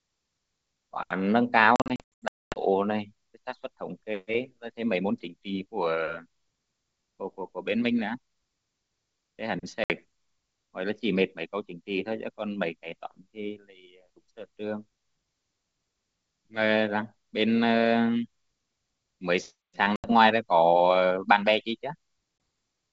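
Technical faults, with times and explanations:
1.76–2.59 s, packet loss on an ADPCM call: about 560 ms of sound drops to silence across 800 ms, the longest hole 240 ms, roughly thirty packets. Each re-entry sounds slightly distorted while the decoder's predictor and step size resynchronise.
9.84–9.92 s, 19.96–20.12 s and 22.38–22.40 s, packet loss on an ADPCM call: hard-edged silent gaps of 60, 80 and 20 ms, each followed by a brief distorted restart. Unlike concealed loss, nothing fills the holes, and the G.722 wideband sound settles within a few tens of milliseconds.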